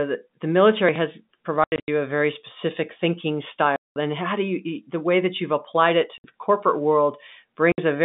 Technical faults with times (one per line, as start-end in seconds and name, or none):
1.64-1.88 packet loss filled with silence
3.76-3.96 packet loss filled with silence
6.18-6.24 packet loss filled with silence
7.72-7.78 packet loss filled with silence